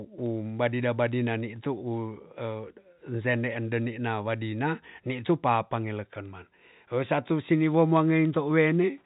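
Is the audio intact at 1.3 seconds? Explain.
No. Word clock ticks run from 0.26 to 8.83 s: an unlocked receiving clock, about 70 ppm off, slips one sample roughly every 0.3 s, producing sharp ticks at a steady rate, unlike randomly spaced clicks.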